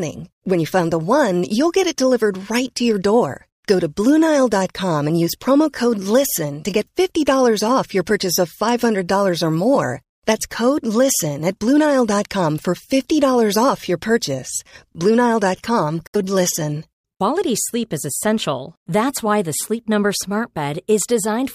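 At 16.07 s the speech cuts to silence, and it returns at 16.16 s, a hole of roughly 70 to 90 ms. This is a Bluetooth dropout, likely caused by a few wireless audio packets failing to reach the headphones in time and being discarded. What sets it apart from a buffer underrun or a stall is that the speech does not pick up where it stopped: it resumes further along, as though it had kept playing through the gap.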